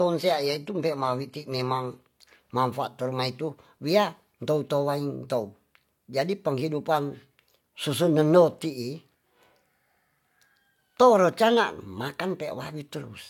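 A speech recording that opens with an adaptive stream starting at a low bitrate. For the first 2.0 s the treble sounds thin and synthetic, and codec artefacts are strong. That points to a low-rate HE-AAC version, around 24 kbit/s, chosen so playback could begin quickly. At 2.0 s the quality jumps with no gap. The player has switched to a better version, which fits AAC-LC near 96 kbit/s. From then on the top end extends to about 14.9 kHz.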